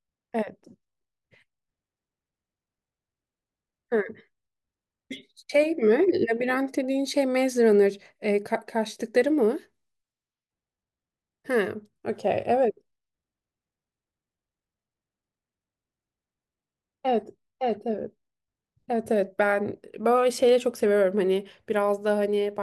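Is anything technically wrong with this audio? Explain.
No, nothing is technically wrong.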